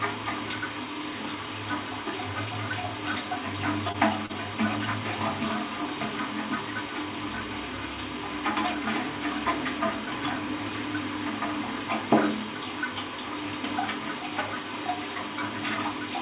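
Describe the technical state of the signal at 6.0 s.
At 6.0 s the audio is intact, with no fault present, and the sound carries the narrow band of a call path coded with G.711 A-law, with nothing above 4 kHz.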